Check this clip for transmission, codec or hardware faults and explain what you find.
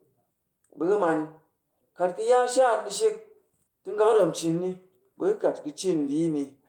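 Nothing in the speech points to a fault anywhere along the recording or delivery chain. There is nothing further to report.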